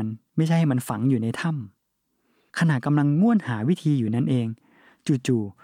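No technical faults can be heard anywhere in the recording, so there is nothing to place in time or explain.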